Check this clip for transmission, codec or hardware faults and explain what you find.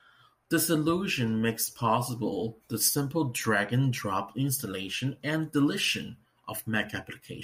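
Nothing in the signal points to a technical problem: the speech stays continuous and steady in level throughout.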